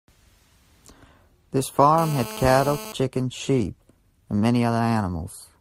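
From 1.98 s to 2.92 s a GSM phone buzz cuts into the speech. A nearby 2G handset in a call is transmitting its radio bursts 217 times a second, and the audio circuitry rectifies those pulses into the signal. The result is a hard, raspy buzz at 217 Hz, about 13 dB below the speech and steady throughout. Mains hum sits at 50 or 60 Hz and sounds smooth, but this buzz is pitched higher and is dense with harsh harmonics.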